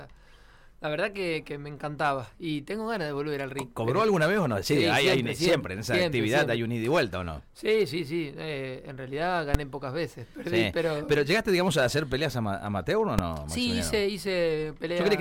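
Invalid numbers at full scale strike at 9.54 s and again at 13.19 s. In each case a calculation produced infinite or invalid values, which the output clamped to its largest positive or negative level, pinning the signal flat at one extreme value, far beyond the audio's peaks, for the whole processing block. Both blocks are very short, about 5.3 ms at 9.54 s, fitting a 256-sample block, and about 2.7 ms at 13.19 s, fitting a 128-sample block, so each lands as a single sharp bang.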